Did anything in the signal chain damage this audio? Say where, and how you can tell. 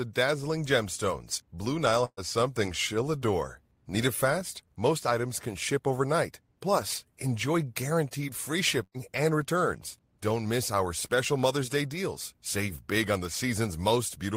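Yes. At 2.05 and 8.83 s the speech becomes a fading hold, then skips about 120 ms: a network burst of packet loss.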